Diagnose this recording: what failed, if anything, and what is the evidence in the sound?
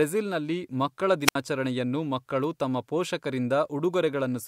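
At 1.24 s the speech picks up a brief rush of hiss, then drops into near silence for about 68 ms before returning by 1.36 s. That sequence points to a wireless microphone squelch dropout in the analogue radio link ahead of any digital stage. The FM signal from the transmitter faded, so the receiver's noise floor rose, and once the carrier fell below threshold the squelch gate muted the output until the signal recovered.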